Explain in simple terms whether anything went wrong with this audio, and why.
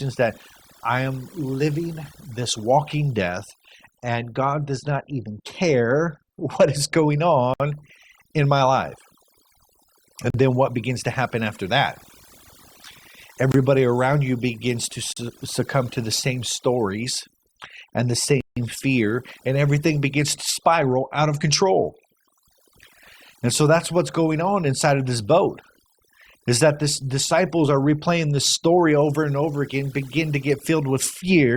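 Overdone noise removal runs through the whole speech recording. A noise reduction tool was set too strong, so it switched off any frequency band that seemed close to background noise, and the quiet parts of the voice went along with them. This is why the pauses sink to near silence with small twinkling specks.

A block of digital silence cuts the sound five times: at 7.54 s, just after "what is going", lasting about 60 ms; at 10.30 s for 40 ms; at 13.52 s for 23 ms, just before "around you begins to"; at 15.13 s for 40 ms, between "around you begins to" and "succumb to the same"; and at 18.41 s for 160 ms. In each one the audio drops straight to silence and comes back with no fade. This is most often because the program didn't fill its output buffer in time.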